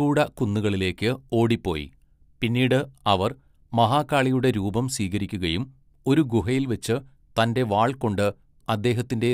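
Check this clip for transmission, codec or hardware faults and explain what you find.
There's one fault here, clock slip clicks, running from 0.29 s to 9.33 s, nearly the whole clip. You get a faint, regular tick about every fifth of a second, around fifty in all, most obvious where the speech is loud and sustained and gone in the gaps. The likely cause is two devices running on separate, unsynchronised clocks about 100 ppm apart, so a single sample gets dropped or repeated each time that drift adds up to a whole sample.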